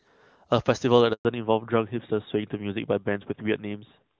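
At 1.13 s the speech stops abruptly for about 120 ms, until 1.25 s. This is a handover gap: while the call moved from one network link to another, no speech frames got through, so the decoder had nothing to play. On the waveform the signal tapers to a flat line within a few tens of milliseconds. On a spectrogram it shows as a clean vertical band of silence across all frequencies. Whatever was said in that instant is gone.

From 1.25 s to the end, the call shows a fallback to narrowband. Before the gap, the speech has the crisp upper range of HD Voice, with no audible codec damage, which fits a high-rate AMR-WB mode. Afterwards, nothing remains above 4 kHz, and the sound fits a switch to the older AMR-NB codec at around its top rate. The spectrogram shows energy that reached toward 7 kHz cut off sharply at a flat 4 kHz ceiling. The speech sounds duller and more muffled, and the sibilants lose their bite.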